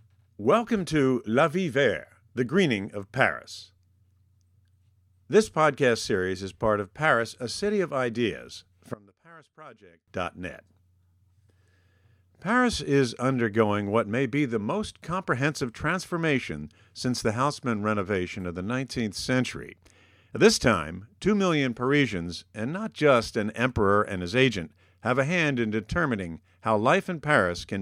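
One channel inverted, 8.94 to 10.08 s, just after "a city of ideas": the speech falls by about 24 dB to a faint remnant. Likely one stereo channel's polarity was reversed, so content shared by both cancels in mono, leaving only their small difference.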